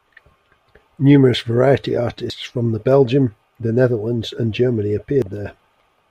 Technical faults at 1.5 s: none

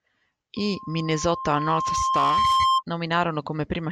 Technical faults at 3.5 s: none

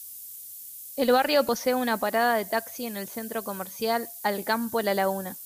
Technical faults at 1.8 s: low bit depth with noise shaping

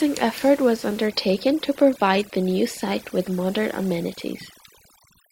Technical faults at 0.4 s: none

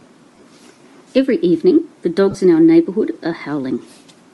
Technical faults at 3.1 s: Bluetooth LC3 compression

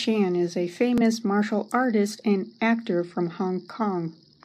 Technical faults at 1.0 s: Bluetooth stutter

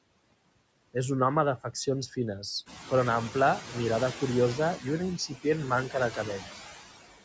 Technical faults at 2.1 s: noise suppressor artifacts; speech cut by the noise suppressor

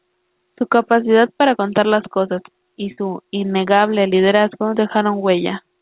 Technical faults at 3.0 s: burst of packet loss

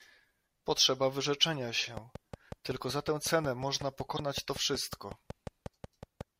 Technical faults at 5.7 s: train of clicks

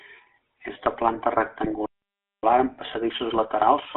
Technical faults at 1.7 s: GSM full-rate codec; GSM bit errors

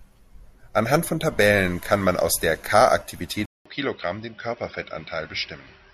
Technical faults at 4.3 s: input switched to a poorer device

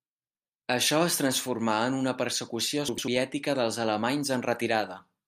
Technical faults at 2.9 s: frames out of order

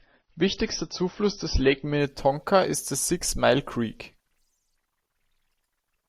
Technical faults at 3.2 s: none

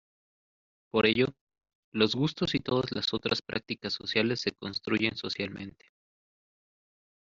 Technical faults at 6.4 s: none

